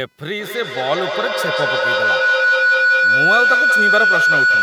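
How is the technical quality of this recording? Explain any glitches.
The technical quality is poor: a feedback howl takes over almost the whole clip, and computer activity noise runs underneath throughout.

Feedback howl, from 0.33 s to the end. A second device on the same call in the same room lets the loudspeaker output re-enter the microphone, and each trip round the loop adds level. The repeats grow and narrow to a tone around 1.5 kHz, pulsing at roughly a fifth of a second, the loop's delay. At its loudest it sits about 6 dB above the speech.

Computer activity noise, throughout. Processor, graphics or mouse load changes shift the audio circuit's shared ground, injecting a buzz pulsing at around 500 Hz. It sits roughly 40 dB below the speech, so it is faint, and it follows the computer's activity rather than the speech.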